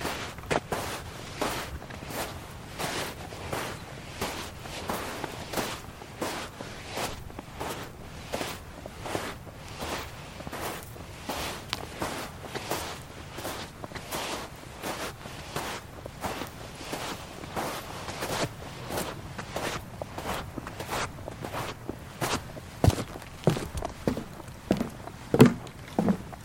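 No technical faults are audible anywhere in the recording.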